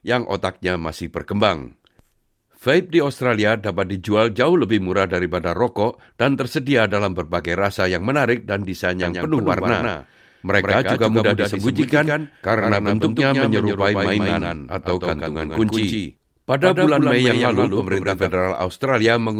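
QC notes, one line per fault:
9.02–18.30 s, doubled audio track: starting just after "yang menarik dan desain", the speech gains a second full-band copy trailing by roughly 150 ms and some 5 dB quieter, with no decay or room colour, cutting in and out abruptly. Likely a second capture path or misaligned edit holding two copies.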